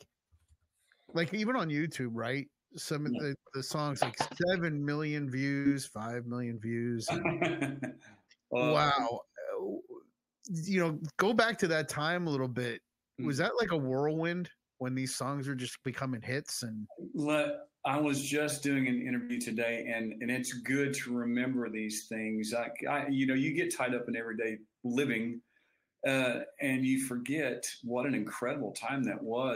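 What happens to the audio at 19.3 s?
A burst of packet loss runs from 19.23 to 19.39 s: lost packets are concealed by a fading continuation of the preceding sound, then playback resumes with material skipped, unlike a clean silent dropout.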